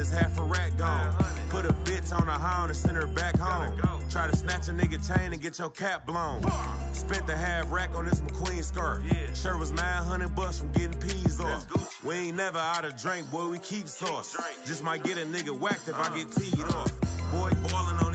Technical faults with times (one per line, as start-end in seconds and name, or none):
none